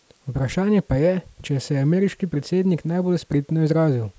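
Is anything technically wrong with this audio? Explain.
No, nothing is technically wrong with this audio.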